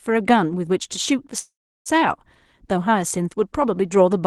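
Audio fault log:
1.39–1.89 s, call audio freeze: the speech stops and the last sound carries on briefly as a decaying buzz or hiss, then fades into about 0.35 s of silence before speech resumes exactly where it broke off. Nothing is lost; the whole passage is simply pushed about 0.46 s later. This is likely a stall in packet delivery that drained the jitter buffer, leaving the receiver to extend the final sound until the audio arrived.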